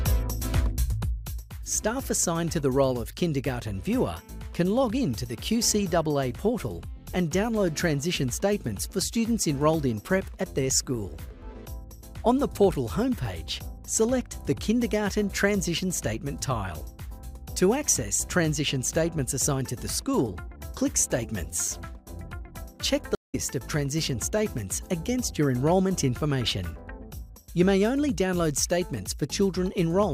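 A stream reconnect at 23.15 to 23.35 s: the connection dropped, the player fell silent for 185 ms, then reconnected and started a fresh decoder mid-stream. The audio picks up roughly a fifth of a second later, so that stretch is skipped.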